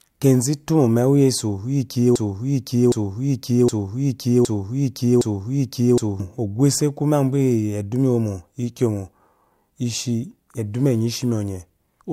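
Speech with a broken-record loop from 2.16 s to 6.20 s: a 0.76 s fragment repeats five times back to back, likely a stalled player or stream resending its last buffer. Unlike an echo, each repeat is identical and undecayed, and the intervening speech is lost.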